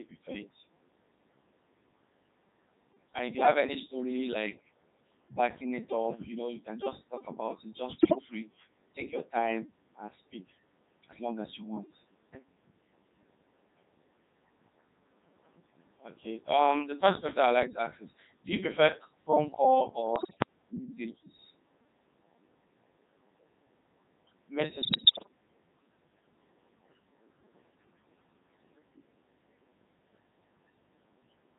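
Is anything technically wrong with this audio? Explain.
Yes. The speech has been through a very low-rate vocoder, and three short stretches show digital radio bit errors on top of it.

Codec 2 vocoder, throughout: the sound fits Codec 2 at about 3.2 kbit/s, and the coding damage is heavy. This vocoder transmits only a pitch value, voicing decisions, frame energy and a coarse spectral envelope. The decoder then rebuilds the voice from a bank of sine waves rather than keeping the original waveform. The result is a robotic, buzzy voice with a synthetic timbre across the whole clip.

Bit errors on digital voice radio, at 7.99 to 8.23 s (just before "to take your time"), 20.16 to 20.46 s (just after "you prefer phone call") and 24.82 to 25.28 s: the voice breaks up into warbles, bleeps and garbled robotic sound, with sudden jumps in pitch, loudness and tone colour. The bursts point to roughly one bit in ten arriving corrupted. 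At this bitrate every bit sets the pitch, level, voicing or spectrum of a whole frame, so each error wrecks an entire slice of synthesis.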